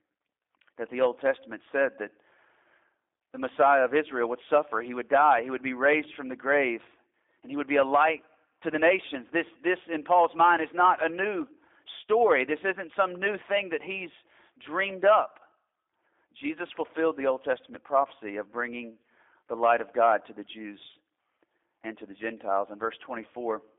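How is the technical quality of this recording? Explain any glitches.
The recording has been through a G.729 codec for its whole length, so the technical quality is that of a compressed VoIP call. Throughout the speech, the band runs only from about 300 Hz to 3.6 kHz, with nothing above 3.7 kHz, and the speech sounds plainly rough and synthetic. The coder rebuilds each 10 ms frame from a vocal tract model, a pitch predictor and a few pulses, which fits an 8 kbit/s G.729A stream. A plain telephone band filter would sound dull but natural. Here the buzzy, slightly artificial texture shows the waveform was resynthesised.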